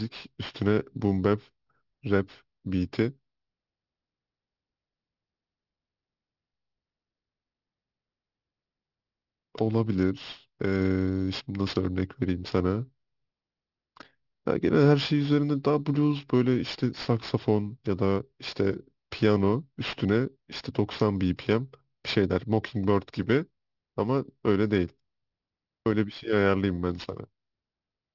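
Aliasing runs through the whole speech clip. The top of the spectrum stops abruptly at 6 kHz, which fits a sample-rate drop to about 12 kHz made without a low-pass filter first. Energy that sat above 6 kHz has folded back below it to unrelated frequencies, roughly 20 dB under the signal. Sibilants come out gritty and metallic, and the spectrum stays dense right up to the band edge instead of rolling off.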